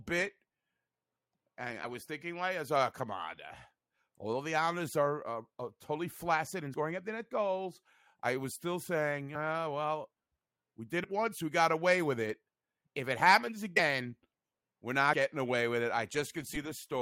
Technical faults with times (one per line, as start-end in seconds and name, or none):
6.74 compressed frames skipped
9.34 compressed frames skipped
11.03 compressed frames skipped
13.76-13.80 compressed frames skipped
16.53-16.57 compressed frames skipped